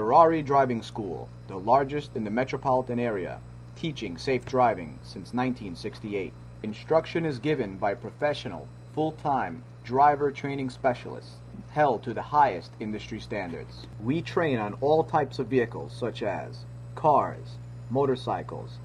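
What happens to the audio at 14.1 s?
Nothing goes wrong at 14.1 s; the audio there plays through intact, with no audible dropout, click, glitch or other fault.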